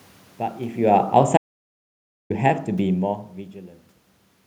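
From 0.81 s to 3.11 s, the speech sinks by about 11 dB. This is automatic gain falling. The gain control judged the input too loud, or its background noise too strong, and turned itself down step by step. The room noise sinks along with the voice, which marks it as a gain change. A talker moving away would leave the room noise where it was. Level shifts near 0.5 s and 3.0 s do sound like the talker moving, and that is separate.

From 1.37 s to 2.30 s, the audio drops out to silence. The gap lasts about 0.93 s. Sound cuts off mid-flow and returns just as abruptly. There is no room tone in the gap at all. Whatever was spoken in that span is lost. The likely cause is a brief loss of the input signal while recording continued.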